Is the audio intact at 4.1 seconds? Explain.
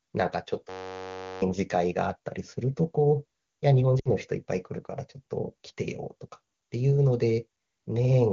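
No, lost AMR speech frames cut through this moment, from 3.99 to 4.09 s. Radio errors broke a short run of frames, about 60 ms, which fits three 20 ms AMR frames. The decoder replaced them by repeating the last good pitch and vocal tract settings at falling gain. The sound smears and drops quickly toward silence, fast in this wideband AMR-WB stream. At 4.1 s it is only just returning, briefly weak or rough.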